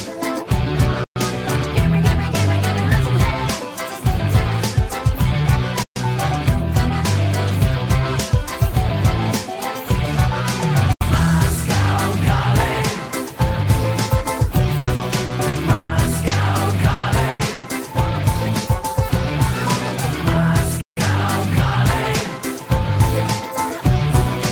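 The sound drops out and freezes four times: at 1.04 to 1.16 s (120 ms), 5.83 to 5.96 s (130 ms), 10.93 to 11.01 s (80 ms) and 20.81 to 20.97 s (160 ms). Each time the waveform flattens and then picks up again softly. That is an underrun with held sample. The output buffer ran dry, and the converter kept outputting its last value until new data arrived. Because playback then resumed from the point where it stalled, nothing was skipped, and the restart is gentle rather than a jump. From 14.77 to 16.33 s the audio turns choppy and robotic, with six separate holes. The longest lasts 160 ms, and together they cover about a quarter of that stretch. This is repeated packet loss. Packets kept failing to arrive, and each hole was covered by stretching the previous sound, leaving a choppy stutter with material missing. A small part of it was rebuilt more faithfully. Three short losses follow close together, at 16.93 to 17.06 s, 17.29 to 17.42 s and 17.53 to 17.66 s. 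In each, the last sound hangs on and fades for 100 ms, and the audio comes back further along, with the part in between gone. These are bursts of packet loss, where the receiver extended and attenuated the previous sound until real data resumed. Inside each burst, a brief slice at about 17.03, 17.39 and 17.63 s sounds grainier and noisier rather than empty. Those are lost packets rebuilt from error correction, played from the low-bitrate copy carried in the next packet.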